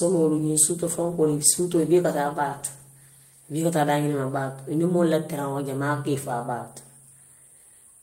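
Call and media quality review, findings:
Call bitrate drop, 0.38 to 3.49 s: speech turns coarse and rough, then clears. Probable component is the Opus encoder reacting to a falling bandwidth estimate. Sounds like the rate fell from about 40 to about 18 kbps and sat at the bottom for roughly 3 s. Fewer bits means cruder coding of each frame, which is where the roughness comes from. Worth checking the bandwidth estimator's logs around that window.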